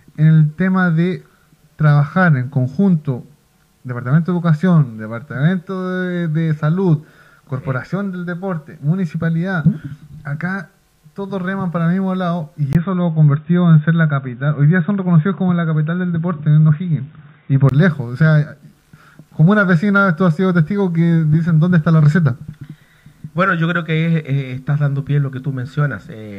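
The recording input was likely switched to a poorer device between 12.73 and 17.71 s, after a 20 ms silence at the switch. Nothing above 3.8 kHz comes through, so the audio turns dull and boxy at an unchanged level, with faint new background noise about 50 dB down.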